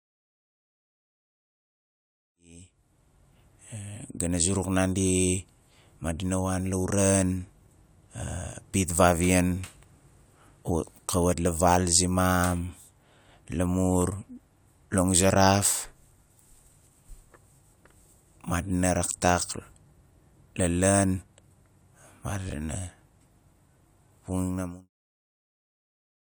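No technical faults can be heard in this speech recording. The level rises in a smooth fade from around 2.5 s to 3.42 s, and a second smooth fade lowers it from about 24.5 s to 24.9 s, with no click or hard edge at either end.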